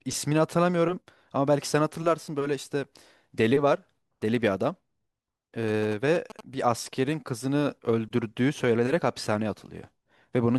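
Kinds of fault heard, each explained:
GSM signalling bursts: a galloping dit-dit-dit of short buzzes at about 217 Hz, from a nearby 2G phone's radio bursts rectified by the audio circuit.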